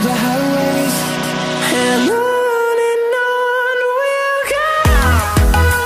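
At 1.23 s the sound stutters. The 160 ms stretch ending at 1.39 s plays twice in a row, jumping back audibly at the seam. These are repeated frames: a run of compressed frames, which fits about five, was decoded a second time, lengthening the audio by 160 ms.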